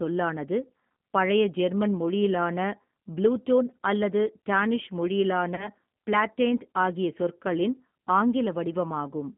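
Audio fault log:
throughout: G.729 codec, 8 kbit/s model-based coding rebuilds speech from filter and pulse parameters, band-limited to roughly 150 Hz–3.4 kHz, leaving plainly rough, synthetic, muffled speech.
5.55–5.68 s: VoIP packet loss concealed by the speech codec, about 30 ms of frames missing, decoder extrapolates and fades, giving a brief buzzy or noisy smear before "ப்ளாட்டேண்ட் ஆகிய சொற்களின்".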